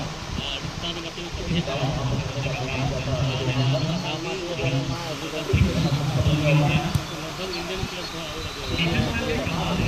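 From 4.95 s to the end at 9.88 s, timecode bleed appears: linear timecode leaking in from a neighbouring track or cable, sitting roughly 15 dB under the sound as a chirping warble near 1 and 2 kHz. Unlike a steady whine, it flips between two pitches and repeats 29.97 times per second.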